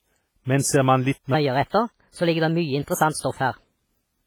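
From start to finish the speech carries heavy WMA compression damage, most likely from a low-bitrate transform encode; the sound fits WMA 1 at around 24 kbps. The encoder's long blocks smear quantisation noise over tens of milliseconds, and weak spectral detail gets thrown away. You hear it as a ringing, washy texture, with a hiss that swells and fades along with the voice.

From 1.34 s to 3.64 s a section at the wrong speed cuts in. That stretch plays about 1.23 times too fast, likely because it was run against the wrong clock. Speed and pitch move together, so the voice jumps up by about four semitones and sounds hurried, then drops back to normal pace and pitch after 3.64 s.

Inside that sped-up stretch, from 3.20 s to 3.24 s, there's a pre-echo. A sharp attack lands late in a codec block, and the noise budget sized for the loud onset gets spread across the whole block, including the quiet lead-in. 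The result is a short hiss of about 34 ms sitting just ahead of the attack, which itself comes out soft and smeared rather than crisp.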